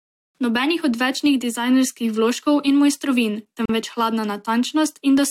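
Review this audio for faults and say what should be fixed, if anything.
There's a gap at a join of encoded pieces at 3.66 to 3.69 s, right after "dizajnerskih vložkov in mojstrovin". The speech just drops out for about 39 ms, with smeared edges, then carries on where it stopped. It sounds like the audio was encoded in chunks, which fits pieces roughly 6 s long, and glued back together without trimming each run's leading encoder delay and padded last frame. To prevent it, encode the speech as one continuous stream, or trim the encoder delay and padding at every join before concatenating.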